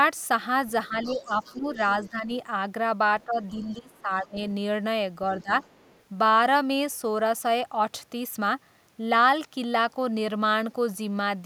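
From 0.88 to 2.31 s and 3.26 to 4.37 s, with a brief dip at 5.42 s, speech is suppressed in double talk: the level sinks by about 10 to 15 dB, likely because the echo canceller turned down both talkers at once. These show as hollowed-out stretches in the waveform. The other side's voice leaks through faintly from 1.03 to 2.09 s, at 3.91 s and from 5.4 to 6.02 s, likely as residual echo the canceller missed. It sits roughly 25 to 40 dB below the speech and appears as a weak second set of harmonics on the spectrogram.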